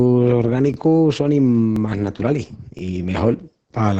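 A short piece of speech carrying two faults. The whole clip has heavy Opus voice compression. It sounds like the SILK speech coder running at roughly 10 kbps, and nothing comes through above 9 kHz. So you get that muffled, hoarse, faintly robotic quality you hear when the excitation is coded this coarsely at a bitrate this low. On top of that there are overlapping chunks. You can hear a little stutter-click at 0.74–0.76 s, 1.76–1.79 s and 2.79–2.81 s, roughly one second apart. That spacing fits audio handled in 1-second blocks where each block starts about 23 ms before the previous one ended. At every join that sliver of audio plays twice, which is what causes the hiccup.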